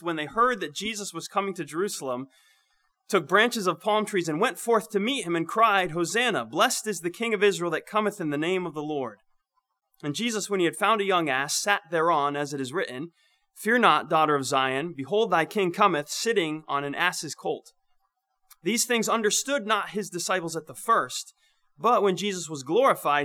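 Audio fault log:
No fault is found in this audio.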